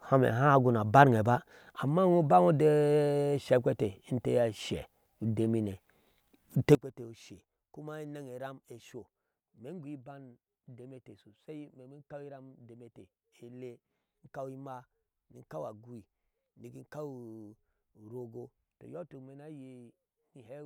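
It's a speech recording, and from 6.75 s right through to the end the level suddenly collapses by about 20 dB, leaving the voice sounding faint. The likely cause is one channel inverted. With one stereo side's polarity flipped, anything shared by both channels, like a centred voice, cancels itself out once they're combined to mono. What you end up hearing is just the small difference left between the two channels.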